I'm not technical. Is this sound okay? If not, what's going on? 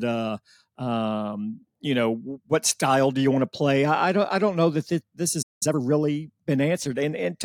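No. Around 5.42 seconds there is a playback stall: the player most likely ran short of incoming data and had nothing to play. The speech cuts out in mid-flow and stays silent for about 0.19 seconds, until 5.63 seconds.

Right after that comes a time-compressed catch-up: to make up the lost time, the player trims and blends tiny slices of the backlog. From 5.63 to 5.81 seconds the speech runs at double speed, hurried but at its normal pitch.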